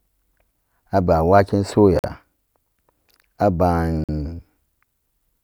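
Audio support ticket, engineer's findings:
Gap between chunks, speech. 1.99–2.04 s, just after "aba'an waken", and 4.04–4.09 s: ~48 ms silent holes, hard edges, 2.0 s apart. Probable component: streaming or playback chunk handling, padding or late chunk start inserting silence at each join. Unlike a dropout, no sound missing; audio resumes exactly where it stopped, and the spacing is strictly regular.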